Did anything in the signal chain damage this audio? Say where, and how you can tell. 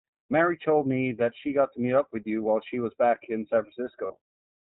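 Yes. At the codec stage, the whole clip carries the iLBC codec's signature: nothing above 4 kHz survives, and the speech sounds plainly rough and slightly synthetic throughout. The texture fits iLBC running in its 20 ms frame mode at around 15.2 kbps, where each frame's excitation is coded independently. A simple telephone-band filter would cut the top end just the same but leave the voice smooth. Here the graininess comes from the coding itself, not from bandwidth alone.

At the network stage there are lost iLBC frames from 4.06 to 4.13 s, a gap of about 40 ms. That span fits two consecutive 20 ms packets going missing. Instead of silence or a click, the decoder filled the hole by repeating the last pitch cycle blended with noise, so it sounds like a briefly held, faintly buzzy vowel. A plain dropout or buffer underrun would leave a hard gap. The voice snaps back clean right after because iLBC frames don't depend on earlier ones.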